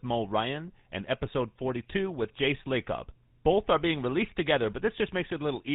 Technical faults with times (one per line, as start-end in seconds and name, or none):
0.00-5.74 GSM full-rate codec